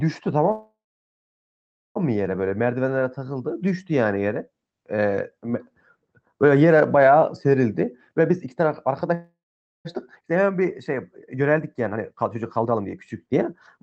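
Call audio freeze, 0.51 to 1.98 s: the sound stops and the last fragment carries on as a brief buzz that fades to about 1.2 s of silence, likely because packets stalled and the jitter buffer ran dry. Speech then resumes where it stopped, so nothing is lost but a 1.44 s gap is inserted.

Jitter buffer speed-up, 8.12 to 9.14 s: to shed the delay that built up, the receiver cuts out tiny pitch-period slices, about a fifth of a second in all. Speech runs at 118% speed with unchanged pitch and sounds hurried.

Call audio freeze, 9.14 to 9.87 s: the same stall-and-resume pattern follows right after, likely another buffer underrun, with a short fading tail and roughly half a second of silence inserted before the audio continues.

Jitter buffer speed-up, 10.20 to 13.36 s and 13.77 to 13.82 s: the first stretch plays at 115%, dropping roughly half a second of audio. The final blip jumps to 195% and removes about 50 ms, a sudden rushed flick at the end.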